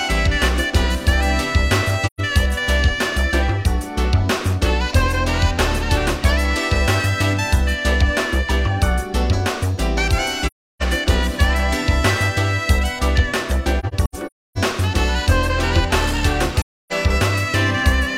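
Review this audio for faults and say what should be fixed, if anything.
AAC frame loss with muting occurs four times: 2.06 to 2.21 s, 10.46 to 10.82 s, 16.61 to 16.93 s, and a broken stretch from 13.79 to 14.58 s whose longest hole runs around 300 ms. Missing frames were decoded as silence, and the overlapping transform windows fade the sound out and back in, leaving soft-edged gaps. Gap lengths fit whole frames of about 43 ms each. Prevent it with reliable transport or retransmission, plus decoder concealment that fills lost frames instead of zeroing them.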